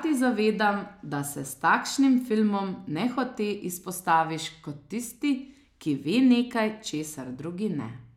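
No technical faults can be heard anywhere in this speech recording.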